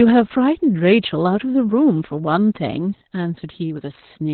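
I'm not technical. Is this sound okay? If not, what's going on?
No. The whole clip has heavy Opus voice compression, which strips everything above about 4.3 kHz, so the speech sounds muffled, hoarse and a bit robotic from start to finish.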